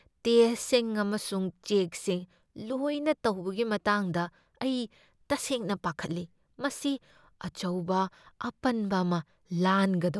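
No technical faults can be heard in the recording.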